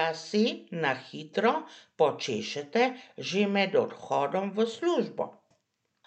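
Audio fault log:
Nothing to log here, as the speech comes through without any fault worth noting.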